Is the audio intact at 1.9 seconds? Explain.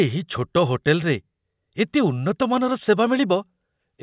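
Yes, the speech at 1.9 seconds is intact, with no fault at that moment.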